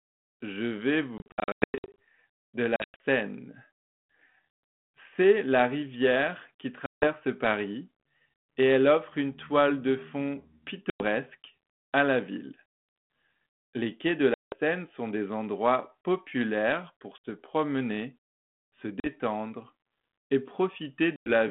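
Hard-edged holes of silence break the speech, and each time it returns with some roughness that settles within tens of milliseconds. They fall at 1.18 to 1.95 s, 2.76 to 2.97 s, 6.86 to 7.06 s, 10.9 to 11.04 s, 14.34 to 14.54 s (after "quais de"), 17.18 s, 19.0 to 19.07 s and 21.16 to 21.29 s. This is packet loss on an ADPCM call. Dropped packets left gaps, and the 32 kbit/s G.726 decoder's predictor and step size drifted from the sender's until they realigned.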